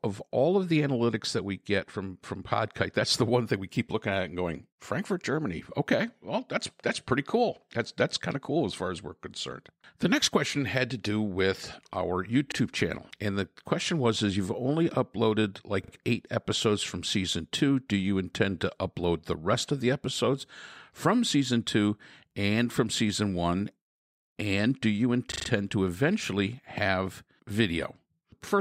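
At 12.52, 15.84 and 25.32 s, new audio failed to reach the output device in time, so it replayed its last block instead: a repeated buffer. Each repeat has a hard join, heard as a quick stutter in the speech, lasting to 12.56, 15.92 and 25.48 s. The piece repeats once, twice, then four times. The repeated length fits a 40 ms buffer, and no speech appears to go missing.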